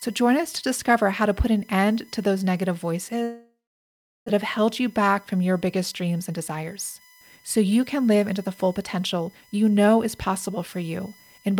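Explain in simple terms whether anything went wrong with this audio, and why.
Yes, several things went wrong.

A USB whine runs through the whole clip. It is a steady high tone at 1 kHz, loudest at 2 kHz, leaking in from the computer's USB power.

Sample clock jitter adds a faint hiss and roughness throughout. An unsteady converter clock causes it. It grows on loud, bright sounds and disappears in pauses.

A long network dropout comes after "end to those negative", from 3.23 to 4.30 s. A fading buzz or hiss fills the gap, then silence. About 0.6 s of speech never arrives. The speech resumes at "have held you back". This was likely caused by audio stalling on the network.

A jitter buffer speed-up runs from 5.92 to 9.65 s, between "back from your biggest" and "know is". The receiver trimmed tiny pieces to catch up. That removed about 0.4 s, so the speech plays 11% faster at the same pitch and sounds hurried.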